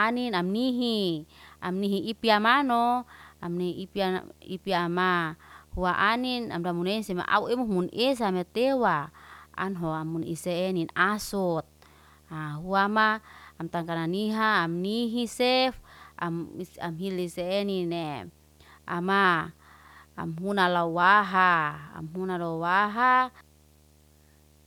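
A steady buzz at 75 Hz sits under the speech from start to finish, with a gritty hash riding above it, and it stays roughly 30 dB below the voice the whole way through. This is video or display buzz: a screen or its video cable is coupling interference into the audio path, and the buzz tracks the picture's field rate, here 75 Hz, rather than the mains frequency, while the hash comes from the sharper edges of that interference.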